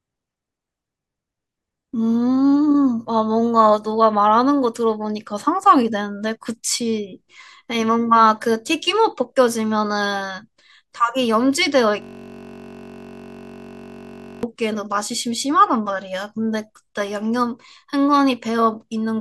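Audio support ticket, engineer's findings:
System hang loop, 12.02–14.43 s. Host or audio driver stalled while the sound hardware kept replaying its ring buffer. One 21.33 ms slice of speech repeats without change, 113 times, which fits a 1024-sample buffer. Heard as a steady 46.9 Hz buzz replacing the speech for about 2.4 s. Suspect driver or host freeze.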